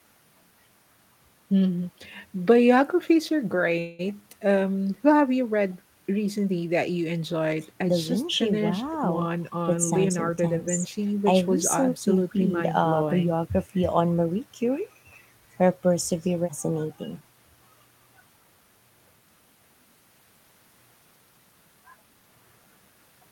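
At 3.79 s there's a call audio freeze lasting until 4.01 s: the last bit of sound gets stretched into a fading buzzy tail for roughly 195 ms, then the speech picks up right where it stopped. Packets were likely held up in transit, draining the jitter buffer, so nothing's lost, just delayed.

Then from 8.88 to 11.13 s you get a jitter buffer speed-up. The talker suddenly sounds a bit rushed, running at about 109% speed with pitch unchanged, because the receiver is snipping out tiny pitch-period chunks, about a fifth of a second in total, to work off the backlog.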